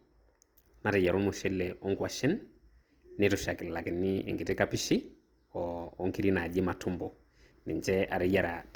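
From start to finish the speech sounds rough and grainy, with a noisy, sandy texture on voiced sounds, while the band stays wide, reaching about 20.2 kHz. This is likely Opus compression in its music-style CELT mode: with too few bits, the encoder keeps each band's energy but fills the detail with folded or noise-like content, which fits a low rate around 24 kbps.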